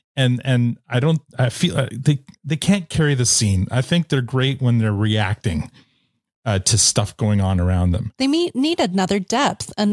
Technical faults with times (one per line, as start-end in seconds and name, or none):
none